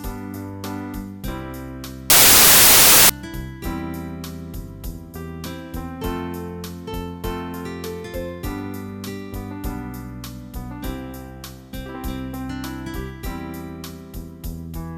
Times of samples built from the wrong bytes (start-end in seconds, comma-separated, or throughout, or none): 2.10-3.09